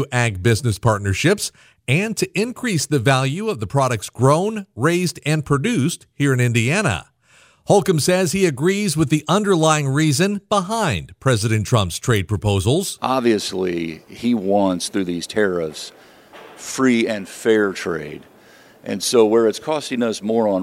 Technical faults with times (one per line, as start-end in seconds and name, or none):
none